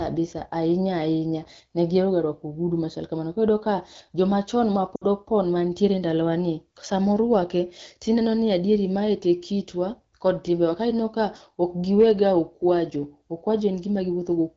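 Just after "iyudo ka jomachon", from 4.95 to 5.05 s, lost AMR speech frames leave about 60 ms, likely three 20 ms frames, concealed by stretching the previous sound with falling level. It drops to near silence within two frames, and the voice comes back weak or rough for a moment.

At 7.33 to 7.36 s, hard clipping flattens a peak pushed only about 0 dB past the limit, giving a brief crackle on that loud moment, unlike the continuous roughness of a low-rate codec. The wideband codec itself sounds clear here.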